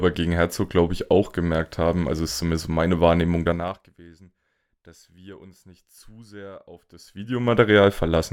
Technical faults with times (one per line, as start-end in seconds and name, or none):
3.48-3.88 zipper noise
6.88-7.60 zipper noise